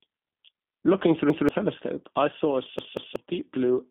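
The speech has passed through a G.729 codec for its whole length, an 8 kbit/s VoIP coder (the G.729A variant) that rebuilds the signal from a vocal-tract filter, a pitch predictor and a handful of pulses per frame instead of carrying the waveform itself. The line band spans roughly 150 Hz to 3.6 kHz, and nothing above 3.8 kHz survives, so the sound is dull and narrow, and the coding damage is plainly audible as a rough, slightly synthetic texture throughout.

At 1.30 s a repeated buffer occurs: fresh audio failed to reach the output in time, so the device replayed the previous block, 185.76 ms long, which fits an 8192-sample buffer. It plays once more, up to 1.49 s, and the same fragment is heard twice in a stutter with a hard join, while around a fifth of a second of real audio goes missing.

A second repeated buffer starts at 2.79 s, with the same block length but replayed twice, running to 3.16 s. 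The fragment sounds three times in a row, giving a longer stutter with hard joins at each repeat, and roughly 0.4 s of audio is lost.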